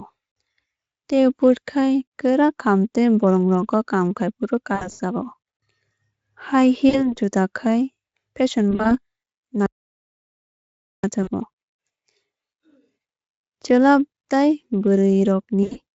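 Around 4.75 to 5.01 s, 6.89 to 7.14 s and 8.71 to 8.97 s you get VoIP packet loss concealed by the speech codec. The Speex decoder fills the gaps by guessing from its last pitch and filter state, so the speech smears into a buzzy tone or coloured noise that fades and stays thin briefly after. At 9.66 s there's an audio dropout to silence lasting about 1.37 s, back at 11.04 s. It's dead silence with no room tone, likely a lost input or mute. Two more concealed losses follow, 11.23 to 11.29 s and 15.63 to 15.79 s.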